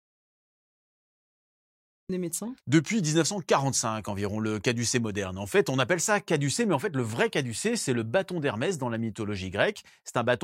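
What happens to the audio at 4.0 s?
Nothing goes wrong at 4.0 s; the speech carries on intact through that moment.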